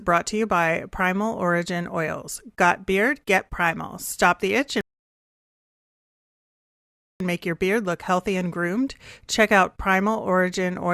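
At 4.81 s there's a rebuffering stall: the player ran dry, went silent until 7.20 s, then resumed right where it stopped, adding about 2.4 s.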